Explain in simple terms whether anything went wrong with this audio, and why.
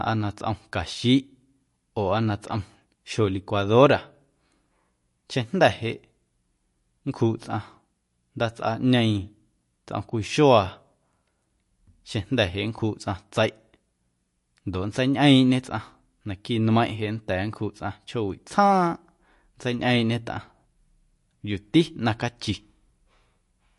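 The speech sounds plainly watery and swirly from start to finish, with dull, muffled treble and nothing above about 11.3 kHz. That points to likely MP3 compression squeezed too hard, which trims the high frequencies and drops faint details that flicker in and out.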